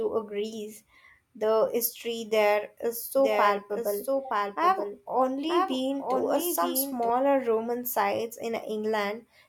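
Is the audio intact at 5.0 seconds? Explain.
No. From 3.18 to 7.10 s, just after "history there is", the speech is doubled: a second, slightly quieter copy, about 5 dB down, trails roughly a second behind, dry and full-band, cutting in and out abruptly. This doubled audio track likely comes from a second, slower capture path.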